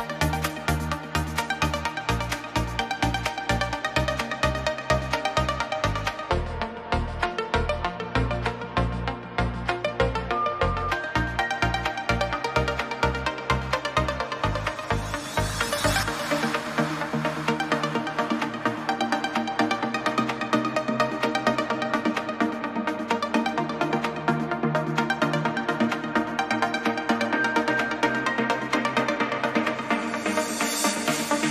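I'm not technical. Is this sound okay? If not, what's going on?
No. There is a section at the wrong speed from 6.30 to 10.92 seconds. For those few seconds the sound plays at about three quarters of its proper speed, so it drags and drops deeper, roughly five semitones lower, before snapping back to normal. Speed and pitch shift together like this when a stretch of audio is played back on the wrong clock, most likely from a mismatch during editing or playback.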